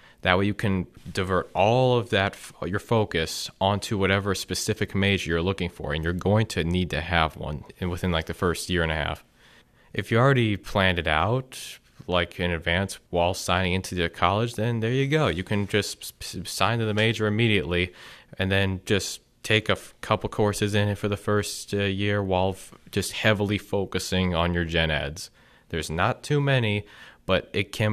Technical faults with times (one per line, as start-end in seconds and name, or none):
none